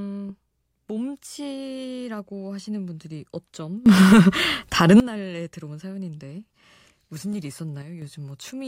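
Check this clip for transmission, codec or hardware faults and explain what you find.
Two sudden gain jumps occur in this speech. From 3.86 to 5.0 s the level leaps up by about 18 dB, then drops back. From 7.82 to 8.02 s it falls by about 6 dB, then returns. Each step is instant, with no fade. The background noise rises and falls with the voice, so the whole signal is scaled at once. The likely cause is a digital gain setting applied between two samples without a ramp.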